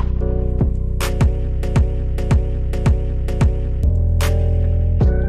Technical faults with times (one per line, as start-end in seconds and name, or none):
1.63-3.83 broken-record loop